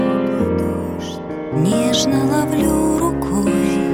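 Nothing is technically wrong with this audio.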